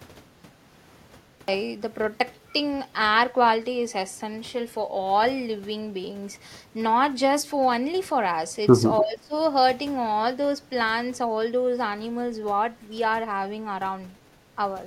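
The clip opens on a cut-off start: from 0 to 1.48 s there is pure digital silence, and at 1.48 s the speech begins abruptly, already partway into a sound, with no attack or fade-in. The capture began late and caught the talker mid-utterance. On a waveform this is a dead-flat line that jumps straight to speech-level amplitude. A spectrogram shows an empty region ending in a hard vertical edge.

From 8.99 to 9.34 s the talker's level drops by up to about 20 dB, so the speech thins and partly vanishes for roughly 0.4 s before recovering. This is speech suppressed in double talk, most likely caused by an echo canceller that could not separate near-end speech from loudspeaker echo while both sides spoke, and so attenuated everything. The waveform envelope pinches sharply there, and the spectrogram shows the harmonics fading or breaking into gaps.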